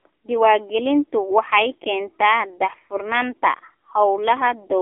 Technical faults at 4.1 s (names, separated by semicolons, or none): AMR narrowband mobile codec